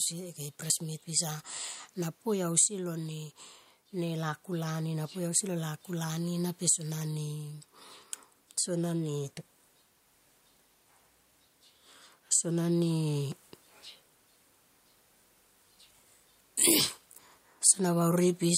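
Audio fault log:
throughout, gain pumping: The room noise sits about 43 dB below the speech, and the gain swings by around 10 dB. This is likely a fast limiter repeatedly pulling down an overdriven input, squashing loud and soft passages together.
0.7 s, dropped buffer (overrun): An abrupt jump forward in the speech, with roughly 20 ms of audio missing and the two sides spliced together with no silence between them. The likely cause is an overrun, where the hardware overwrote samples before the program collected them.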